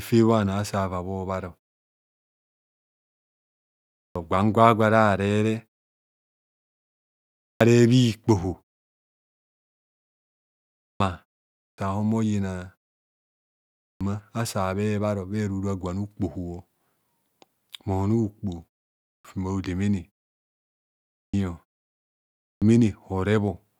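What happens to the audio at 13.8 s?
A clipped start after a pause: following a 1.04 s silence, the output wakes late, swallowing 13.73–14.01 s, so the speech begins abruptly, missing its first sounds.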